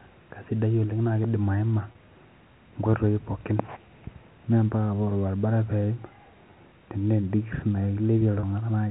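Packet loss with pitch repetition occurs at 1.92 to 1.95 s and again at 8.40 to 8.43 s. Each gap lasts 30 ms, which points to a single lost packet. The receiver filled it by repeating the last pitch period of the preceding sound. Because the gaps are short, the sound never fades to silence. Instead, each produces a brief, slightly held buzz before normal audio resumes, heard through the band-limited G.711 telephone channel.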